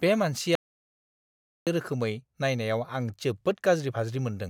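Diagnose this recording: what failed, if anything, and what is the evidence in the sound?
An audio dropout to silence runs from 0.55 to 1.67 s, about 1.1 s of speech lost. The signal cuts abruptly to silence with no room tone, unlike a noise gate's residual floor, pointing likely to a lost input link or mute upstream of the recorder.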